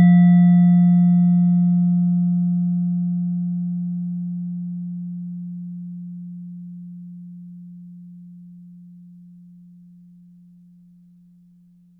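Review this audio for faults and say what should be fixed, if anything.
No faults turn up in this audio, so nothing needs to be fixed.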